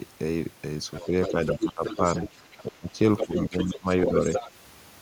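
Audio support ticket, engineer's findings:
Other side's voice leaking through, 0.94 to 4.51 s. A second talker is audible under the near-end speech. It sits only a few dB below the main voice, so it is plainly heard. It is present for most of the clip. Cause is likely residual echo. The far-end signal plays from the local loudspeaker and reaches the microphone. The echo canceller leaves part of it in the send path.

Speech suppressed in double talk, 1.09 to 4.14 s. The near-end voice dips while the far-end voice is active. The deepest drop is around 15 dB. Dips total about a second and a half across that span. Cause is likely the echo canceller during double talk. It cannot split the local talker from the loudspeaker echo. It attenuates both together, pulling the wanted speech down with the echo.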